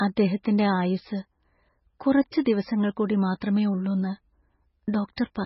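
From start to finish the speech has a hard ceiling, with nothing above 5.6 kHz, and the remaining top end sounds watery and swirly. That's heavy MP3 compression damage, most likely from a very low bitrate, somewhere around 16 kbps. Starved of bits, the encoder chops the treble off at a fixed point and drops the quieter frequency lines, which then flicker in and out between frames, giving that unsettled, underwater shimmer.

At 2.45 s and again at 3.41 s you get pre-echo: a short hiss arriving just ahead of a sharp attack, about 13 ms early the first time and 12 ms the second. The codec smears its quantisation noise evenly across each transform block, so when a sudden onset sits late in a block, noise scaled for the loud part leaks into the quiet stretch before it. The attacks lose their edge and come across soft.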